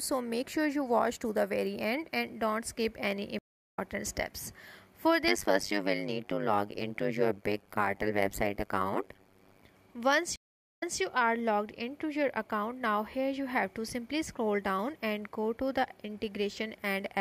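Stream reconnect at 3.39 to 3.79 s: the connection drops, leaving 390 ms of silence, and a freshly started decoder picks up the audio roughly a fifth of a second further on, so a short stretch is skipped.

Overlap-add ripple from 5.28 to 9.65 s: the frames are rejoined with an overlap that doesn't sum to constant gain, so the level swings by about 60 dB roughly a hundred times a second. This is heard as a metallic buzz with extra tones around each note.

A second stream reconnect at 10.36 to 11.00 s brings 457 ms of silence. The audio then resumes 183 ms earlier than where it broke off, repeating that moment.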